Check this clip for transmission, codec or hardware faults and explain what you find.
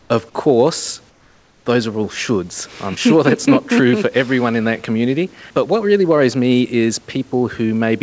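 There's one fault here, comfort noise in place of the background, happening twice. From 0 to 0.10 s, and again from 1.10 to 1.66 s right before "those are all shoulds", the room's natural background noise gives way to a smooth, featureless noise, about 2 dB and then about 4 dB quieter. That's likely discontinuous transmission: the sender goes quiet in pauses and the receiver fills in synthetic noise. The audio also runs through a G.722 call path, so nothing sits above 8 kHz.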